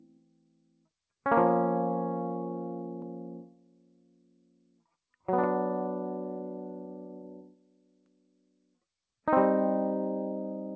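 A speech noise suppressor was left running on this music, which passes through a G.722 call path that leaves nothing above 8 kHz. Throughout, the suppressor mistakes sustained tones and ambience for noise, so the level swings by around 20 dB, pumping and thinning as held sound sinks while attacks get through.

The suppressor cut sound hardest at 0.00–0.89 s, 3.43–4.85 s and 7.43–8.79 s, pulling the music down by about 19 dB at its deepest. In these stretches, held and decaying material drops away and tails are cut short, leaving the passage hollow and fluttering.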